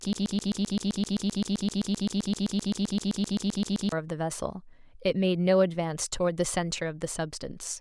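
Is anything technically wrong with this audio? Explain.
Yes. A broken-record loop is already under way when the speech begins and runs from 0.0 to 3.92 s. A fragment of about 130 ms repeats identically, back to back, roughly 29 times, in place of the speech. The likely cause is a player or stream that stalled and kept replaying the last piece it held, so the speech meant for those seconds is lost. Unlike echo or flutter, each repeat is an exact copy, with no decay and no new material.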